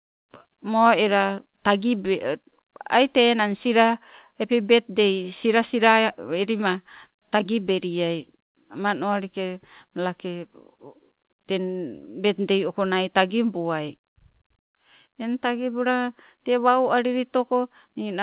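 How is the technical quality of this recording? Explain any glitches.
Listening through the speech, nothing stood out as a glitch or technical problem; the call path behaves as a G.711 mu-law link would, with no content above 4 kHz.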